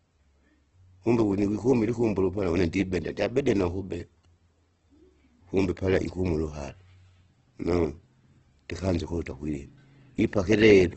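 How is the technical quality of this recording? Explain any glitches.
The quality is poor throughout, with heavy coding damage. The speech sounds grainy, rough and noisy, and nothing is heard above about 8.1 kHz. This is likely Opus compression at a low rate, fitting around 12 kbps. The encoder fills starved bands with noise, which roughens the tone.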